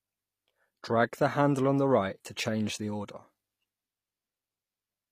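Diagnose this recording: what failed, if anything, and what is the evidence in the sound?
Codec stage, throughout: the treble is bright but gritty and lispy on s sounds, with nothing above 15.5 kHz, likely HE-AAC compression at roughly 24 kbps rebuilding highs by band replication rather than simply dulling them.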